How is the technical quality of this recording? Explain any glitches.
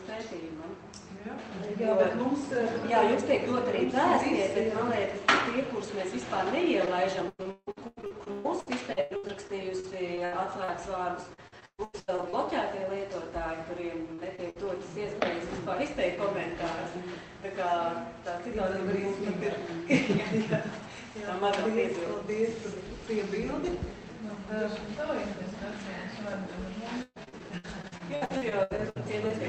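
The recording has audible dropouts. Repeated packet loss (robotic sound) occurs from 6.85 to 12.35 s, 14.14 to 14.92 s, and 27.02 to 29.31 s. Lost packets are patched by stretching the previous sound, giving choppy sound with pieces missing. The gaps last up to about 156 ms. On a spectrogram they appear as smeared, repeated vertical slices, and on the waveform as chopped, repeating segments. Above the call codec's band limit, near 8 kHz, the spectrogram is empty.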